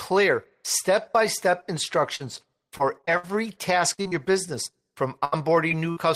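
Repeated packet loss (robotic sound) runs from 2.15 to 3.25 s, right after "step by step", and again from 3.93 to 5.98 s. Short holes, the longest 61 and 71 ms, are filled by extending the preceding sound, so the speech turns choppy, with pieces missing.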